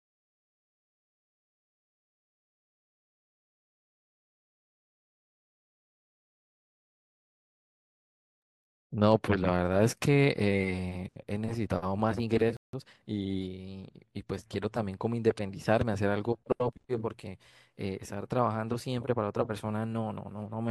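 A playback stall at 12.57 s cuts the speech off mid-flow, leaving about 170 ms of silence before sound resumes at 12.73 s. The player likely ran short of buffered data, or its output thread was briefly blocked, so nothing reached the output.

Time-compressed catch-up follows from 12.73 to 13.05 s. The player works off the backlog from the gap by cutting out and cross-fading small slices. The speech runs at roughly 1.5 times normal speed, hurried but at unchanged pitch.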